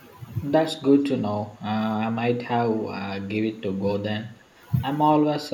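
From 3.83 to 3.92 s, an echo canceller most likely misjudged double talk, taking the talker's voice for loudspeaker echo while both sides spoke. It turned the speech down, producing a brief dip of roughly 20 dB lasting about a tenth of a second. This is speech suppressed in double talk.

At 4.39 to 4.45 s, a far-end echo canceller likely failed to remove everything its microphone picked up from the loudspeaker. That residue was sent back as echo leak: a very faint scrap of the voice, around 35 dB below the speech, trailing it by 316 ms.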